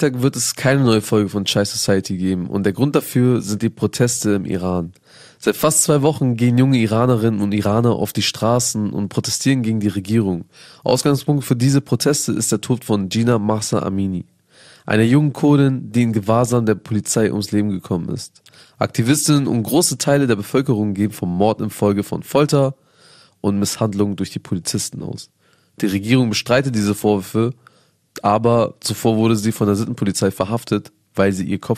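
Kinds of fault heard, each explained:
MP2 compression: the speech was likely coded with MPEG Layer II at a low rate, around 80 kbps, starving its sub-bands of bits so upper bands drop out and flicker while the rest are coarsely quantised, leaving the voice dull, gurgling and granular throughout.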